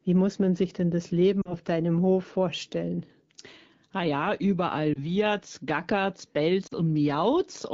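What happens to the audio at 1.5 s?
Around 1.41 to 1.56 s there are lost AMR speech frames. About 40 ms of wideband speech, which fits two dropped 20 ms frames, is replaced by the decoder repeating its last good pitch and vocal tract settings at falling gain, giving a brief smeared warble and dip. On a spectrogram, the harmonics flatten and fade. The waveform envelope sags before recovering.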